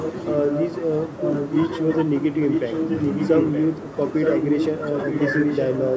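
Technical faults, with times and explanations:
0–0.2, 0.43–0.7, 1.18–1.96, 2.33–3.66 and 4.17–5.9 s, echo leak: a copy of the speech trails it by about 0.92 s, a little quieter than the talker and about as loud from 2.33 to 3.66 s. This is likely a far-end loudspeaker's echo canceller letting its pickup slip back.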